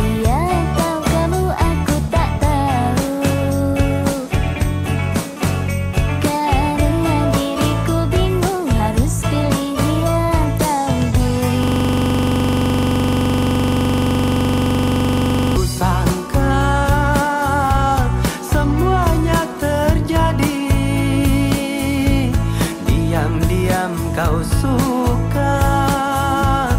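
A system hang loop runs from 11.63 to 15.57 s: the system froze and one 42.67 ms buffer replays continuously, producing a rattling 23.4 Hz stutter.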